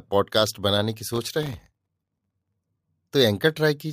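From 1.14 s to 2.54 s the speech is overlaid with processor overload crackle: the processing could not keep up, and around a hundred tiny buffers, each well under a millisecond, missed their deadlines and came out as silence. These hard-edged micro-gaps fuse into a gritty, tearing crackle that clears as soon as the load eases. Unlike a single dropout, it is a dense run of tiny gaps rather than one audible hole.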